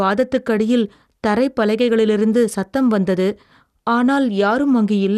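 Across the whole speech recording the sound is dull and carries a gurgling, granular roughness, most likely from MP2 compression at a low rate that fits about 80 kbps. Starved of bits, the encoder drops upper sub-bands and coarsely quantises the rest, so nothing survives above 12.2 kHz. On a spectrogram that shows as a hard ceiling with blocky patches flickering on and off beneath it, while the waveform looks unremarkable.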